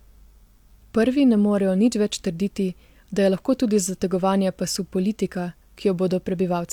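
Nothing goes wrong anywhere in this speech recording; there's no fault to point to at any moment.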